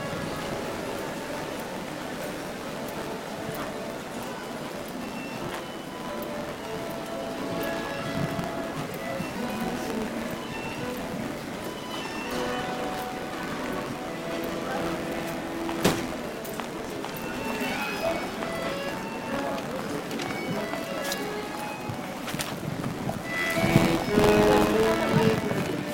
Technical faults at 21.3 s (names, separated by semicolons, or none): buffer tearing